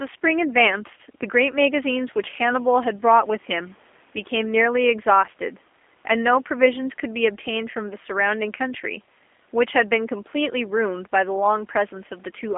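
From start to finish the speech carries G.729 codec damage, and it's plainly audible. Each 10 ms frame is rebuilt from a vocal tract filter, a pitch predictor and a few pulses, so voicing comes out slightly rough and synthetic. The band sits at roughly 250 Hz to 3.5 kHz, with nothing on top, which fits an 8 kbit/s G.729A link. The faint room noise, about 36 dB under the speech, gets a warble.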